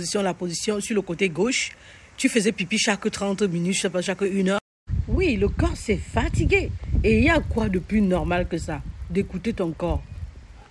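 From 7.32 s to the end of the clip, a low, rough buzz rides on the audio at 50 Hz. It sounds like a rapid train of ticks that fuse together, and it is present only where there is signal. This is a resampler restarted on every block. The audio was rate-converted, apparently a halving from 48 kHz to 24 kHz, in separate 20 ms chunks. At each chunk edge, the converter lacked the real neighbouring samples, leaving a small error every 20 ms.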